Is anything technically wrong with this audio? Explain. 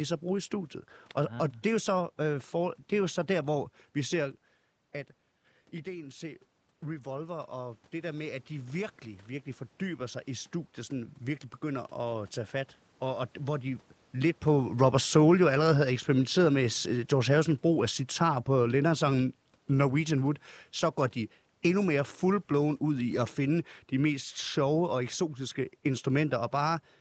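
Yes. From 5.84 to 13.9 s, automatic gain rising: after the input fell about 10 dB, the gain control slowly added about 8 dB. Unlike a talker simply moving closer, the room noise swells along with the speech.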